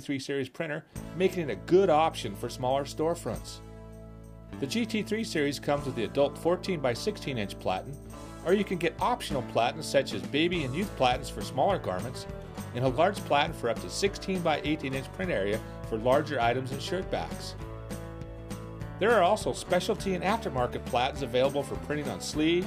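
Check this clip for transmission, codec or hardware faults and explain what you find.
Nothing in the signal points to a fault anywhere along its path; its technical state is sound throughout.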